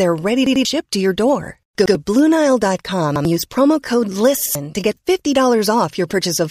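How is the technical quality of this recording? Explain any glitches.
The speech has four repeated-buffer stutters. They fall at 0.46 to 0.65 s just before "to your door", at 1.86 s, at 3.16 s before "use promo code", and at 4.46 s between "use promo code" and "to get". Each time the playback device ran short of fresh audio and replayed its last block, about 93 ms long, which fits a 4096-sample buffer. The first block sounds three times, and the others twice, with a hard join at each restart. The audio lost is about 200 ms at the first stutter and about 100 ms at the others. A dropout would leave silence instead, but here the same fragment of speech is heard again.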